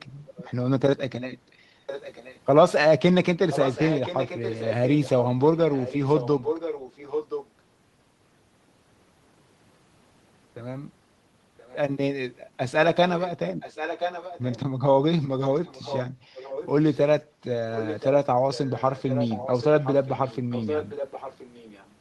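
From 0.26 to 0.49 s, a faint delayed copy of the speech returns about 1.02 s late. This is an echo leak. The far end likely played the call on a loudspeaker, and its echo canceller let some through. From 1.38 to 1.86 s, the room sound dips by up to about 6 dB for a moment. This is background gated by the echo canceller, which turned the microphone down while the loudspeaker played. The echo comes back stronger from 1.86 to 2.4 s. It runs long and clearly audible from 3.5 to 7.48 s. A faint scrap recurs from 11.57 to 11.76 s. It returns loud from 13.08 to 21.9 s. Within that stretch the background briefly drops again, by about 8 dB at 16.16 to 16.3 s and about 6 dB at 17.27 to 17.4 s.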